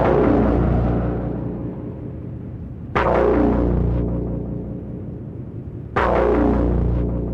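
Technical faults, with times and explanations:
1.58–1.61 s and 3.03–3.08 s, corrupt frame decoded: damaged compressed frames were played instead of concealed, so misread gains and codes put energy at the wrong frequencies, giving short bursts. The first is faint, peaking about −30 dBFS. The second, consistent with two consecutive frames, is louder, about −10 dBFS.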